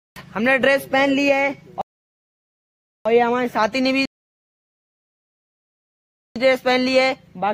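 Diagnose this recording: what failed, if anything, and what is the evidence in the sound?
The sound drops to dead silence twice, from 1.81 to 3.05 s and again from 4.05 to 6.36 s, and each time picks up exactly where it left off with nothing skipped. That is a rebuffering stall at the playback stage: the player exhausted its downloaded audio and waited for more data from the network before continuing. The two gaps add about 1.24 s and 2.3 s respectively, stretching the clip without losing any content.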